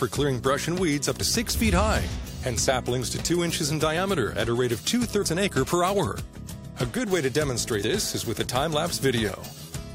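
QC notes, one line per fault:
1.20, 3.96, 5.21, 7.81 and 9.28 s: compressed frames skipped. At each point the audio jumps ahead, losing roughly 50, 20, 70, 100 and 50 ms. Each gap is a whole multiple of a 23.2 ms frame, which fits 1024-sample frames at 44.1 kHz. The missing frames were never decoded.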